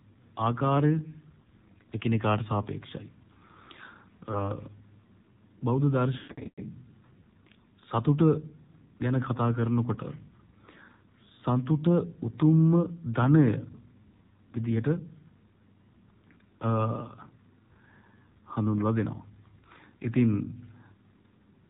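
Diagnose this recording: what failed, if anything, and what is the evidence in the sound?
Codec stage: AMR narrowband mobile codec. Audio is cut off above 4 kHz, with a buzzy, synthetic quality throughout, which fits AMR-NB's 7.4 kbps mode.

Network stage: lost AMR speech frames. Brief dips or warbles at 1.42 and 4.32 s, then drawn-out, fading sound from 6.18 to 6.62 s, where the decoder concealed frames by repeating the last good ones.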